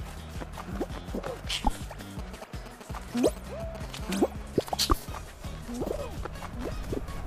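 From 2.19 to 3.85 s the audio picks up GSM signalling bursts: a galloping dit-dit-dit of brief buzzes pulsing at about 217 Hz, fairly loud at roughly 10 dB below the wanted signal. A 2G handset close to the equipment is exchanging short groups of radio bursts with the network, as it does in its signalling state, and some part of the audio circuit is rectifying that RF so each group is demodulated into a short audible burst. From 4.03 to 6.52 s this gives way to a continuous GSM phone buzz: a hard, raspy tone at about 217 Hz, rich in harmonics, sitting at about 23 dB below the signal and entirely unrelated to it. The handset is now in a call, transmitting a steady train of bursts at its frame rate, and the same rectification turns that pulse train into a constant interfering buzz.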